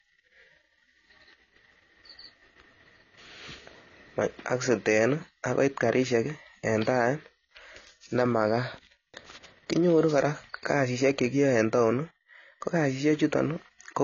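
Speech runs for its full 14 seconds with nothing above 7 kHz, so sibilants and consonant edges sound dull, and the artefacts of the first encoding remain. On a spectrogram this appears as a hard, flat ceiling at 7 kHz across the whole clip. This is likely low-bitrate audio saved at a high bitrate: a heavily compressed source, consistent with a low-rate AAC stage, re-encoded to a much larger MP3 that cannot restore the missing band.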